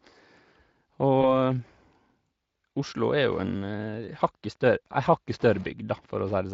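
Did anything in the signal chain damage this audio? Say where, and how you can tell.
Yes. In the network stage, VoIP packet loss concealed by the speech codec occurs at 1.21 to 1.25 s. A gap of about 20 ms, consistent with one lost frame, was filled by the decoder extrapolating the previous pitch and filter at falling gain. The speech briefly turns buzzy or noisy and fades before recovering.

In the analogue wiring, Wi-Fi interference runs from 3.07 s to the end. A nearby radio's beacons are rectified by the circuit, giving faint ticking every 102.4 ms, about ten per second, well below the speech. This sits on top of the light Speex coding, which belongs to the ordinary path.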